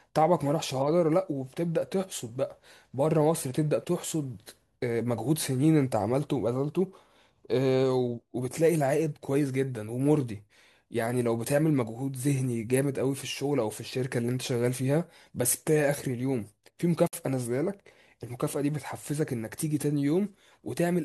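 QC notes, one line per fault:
17.07–17.13 s: gap at a join of encoded pieces. Speech drops to silence for about 56 ms, then resumes exactly where it stopped. Two separately encoded segments were joined untrimmed, leaving encoder start delay and final-frame padding in place; the gap's edges are smeared by the codec.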